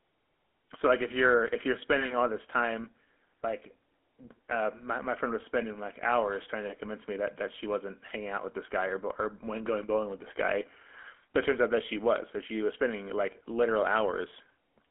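From start to finish the speech carries GSM full-rate codec damage, a plainly audible buzzy, gravelly roughness that fits the 13 kbps coder. It rebuilds the voice from a vocal-tract model excited by sparse pulses, so detail is lost. The band sits at about 250 Hz to 3.4 kHz, with nothing above 3.8 kHz.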